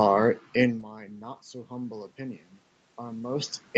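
From 0.92 to 3.59 s, automatic gain rising: after the speech level dropped by about 20 dB, the gain control slowly brought the level up by about 6 dB. Unlike a talker simply moving closer, the room background swells along with the voice.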